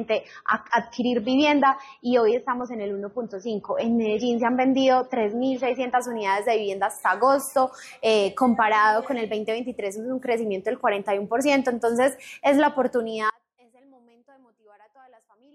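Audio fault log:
0.0–6.0 s: adaptive stream starting at a low bitrate. Nothing is heard above about 6.3 kHz, and the top end sounds dull and smeared, with stronger codec artefacts. This fits a player that opened on a cheap rendition of around 24 kbit/s AAC to start fast. At 6.0 s the treble returns in one abrupt step with no gap or silence, consistent with a jump to about 96 kbit/s. A gradual rolloff would sound different, and so would a dropout, which loses the signal instead of just its detail.
13.30 s to end: audio dropout to a faint residue. The sound cuts out mid-flow and never returns before the clip ends. What remains is only a faint sound, roughly 35 dB below the signal's normal level. The likely cause is a break in the source while the playback path stayed live. The change is instant, which separates it from a deliberate pause or a fade-out, and the weak residue shows the path is still passing something rather than cutting to digital silence.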